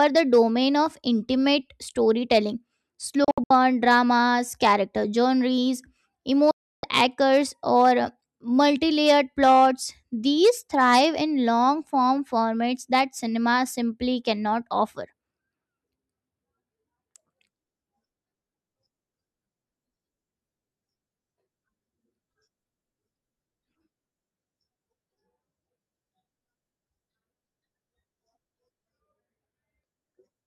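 Speech with a digital broadcast dropout. Bad frames muted the receiver. At 3.24 to 3.51 s, short holes come before "dramas character genres". At 6.51 to 6.84 s, a 320 ms gap precedes "anchors or".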